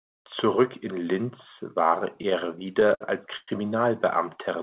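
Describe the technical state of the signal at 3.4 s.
At 3.4 s the signal sits inside a run of repeated stalls (stutter) lasting from 2.16 to 3.50 s. Packets arrived too late for the jitter buffer, which ran dry twelve times; each gap was bridged by extending the preceding sound, the longest for 111 ms, so about a fifth of that span is concealment but nothing is lost. It sounds dragged and hiccuping. A spectrogram shows smeared, repeated frames and flat-topped envelopes, all below the 4 kHz ceiling of the G.711 call path.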